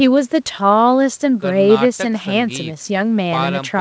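No technical faults can be heard in the speech, which carries nothing above 8 kHz, as expected after a call's microphone processing and a wideband call codec that fits G.722 at 64 kbps.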